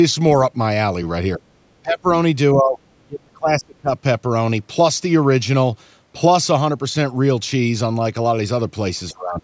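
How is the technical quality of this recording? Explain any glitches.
The recording has repeated dropouts in the speech, most likely speech suppressed in double talk, at 1.38–1.57, 1.82–2.07, 2.54–2.80, 2.96–3.91 and 9.11–9.43 s. The echo canceller, confusing near speech with loudspeaker echo, pulls level down by about 15 to 35 dB, so the speech dips or drops out.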